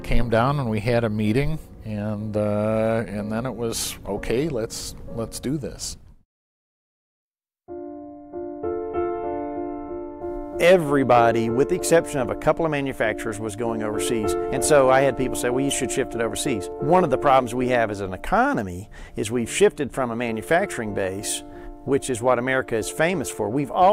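No technical faults are audible.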